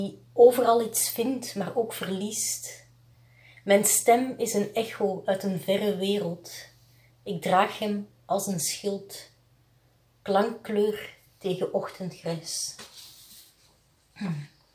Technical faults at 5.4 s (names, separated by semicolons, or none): none